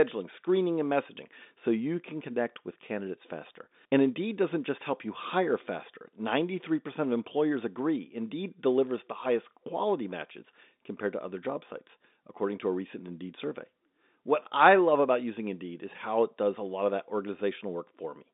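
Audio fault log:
Nothing stood out on listening to this speech recording, which carries the narrow band of ordinary telephone coding.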